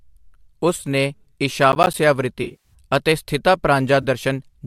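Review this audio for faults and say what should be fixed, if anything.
AAC frame loss with concealment occurs at 0.76 to 0.85 s, 2.43 to 2.74 s and 4.02 to 4.05 s. Missing frames are filled from the last good spectrum, giving smeared, noisy, phasey patches. The middle event is worst: about 200 ms lost across 300 ms, with one run near 70 ms. Adding forward error correction or redundancy, or improving transport reliability, would prevent this.

Processor overload crackle runs from 1.72 to 1.94 s. A handful of audio buffers miss their deadline and are replaced with silence. The gaps, which suggest buffers of roughly 10 ms, create a gritty tearing that stops once the load passes. A larger buffer or lower CPU load on the audio thread would prevent it.

Light graininess across the audio is likely from a low-delay AAC codec.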